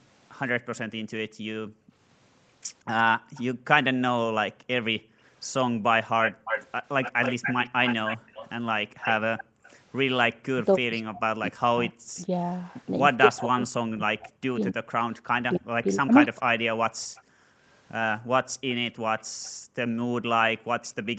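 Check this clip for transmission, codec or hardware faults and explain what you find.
There are three echo-canceller problems here, all on the speakerphone side of a call. The audio tops out around 8 kHz, consistent with the Opus call path it went through.

Background gated by the echo canceller: from 0.53 to 9.64 s, and again from 16.81 to 20.69 s, the room tone keeps ducking out, by about 40 dB at worst. That's roughly two seconds in the first stretch and a second and a half in the second. The canceller is clamping the mic hard whenever the loudspeaker plays.

Echo leak: from 0.76 to 12.84 s there's a delayed copy of the voice trailing 274 ms behind. It's strong, only about 5 dB under the direct speech. The likely cause is the speakerphone side's canceller letting loudspeaker pickup slip back down the line. From 17.15 to 20.87 s the same 274 ms echo returns but much fainter, around 30 dB down.

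Speech suppressed in double talk: between 10.48 and 16.48 s the talker's voice gets pushed down in chunks, up to roughly 40 dB, adding up to about three seconds. This is likely the canceller failing to separate the overlapping talkers and muting both.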